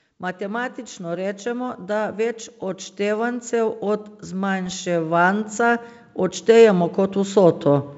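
From 0.21 s to 7.93 s, automatic gain rising: the gain control judged the input too quiet and kept turning it up, about 15 dB in all, so speech and background noise swell together. On a waveform the envelope widens steadily; on a spectrogram the noise floor brightens.

Between 4.66 s and 4.73 s come bit errors on an ADPCM link. Flipped bits, at a low rate of a fraction of a percent, throw off the decoder's predictor and step size, giving rough pops and brief level jumps. These show as spiky waveform glitches and thin vertical broadband streaks.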